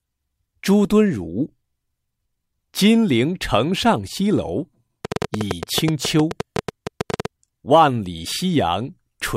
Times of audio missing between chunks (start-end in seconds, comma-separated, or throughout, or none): none